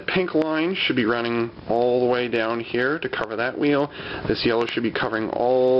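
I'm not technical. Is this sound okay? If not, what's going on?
No. There are two problems. The first is gain pumping throughout: the level swings widely. This is likely because the input was set far too high and an automatic limiter kept pulling it back. Unlike a simple fade, it follows every loud moment.

The second is a loud pop at 0.42–0.44 s, another at 3.24–3.26 s, and a pair of pops at 4.61–4.71 s. These are sudden electrical jolts, likely from a plug, switch, static or driver glitch, and the sound carries on underneath rather than cutting out.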